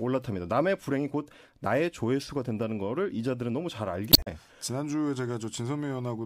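A speech recording with damaged data in the compressed stream from 4.09 to 4.27 s. Corrupted bytes there throw the decoder out of sync while it hunts for the next valid frame header, so roughly 0.18 s of the speech is disrupted.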